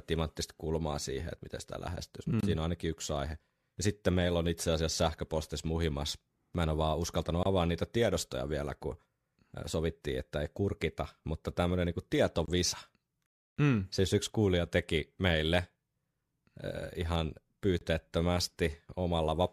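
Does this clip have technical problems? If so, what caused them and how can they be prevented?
Yes. Gaps between chunks occur at 2.41–2.43, 7.43–7.46, 12.46–12.48 and 17.79–17.81 s, right after "miten sitä lähestyisi mm" and "en ole vaan uskaltanut". Each 25 ms hole recurs every 5 s, where chunks join with leftover padding or a late start. The waveform shows flat lines and the spectrogram shows sharp-edged blank stripes. Trim codec padding and queue each chunk for gapless playback.

A rebuffering stall from 13.26 to 13.57 s adds about 0.3 s of silence after the player's buffer emptied, then resumes without loss. It appears as a wider empty band on the spectrogram. Buffer more audio ahead and adapt the stream to the available bandwidth.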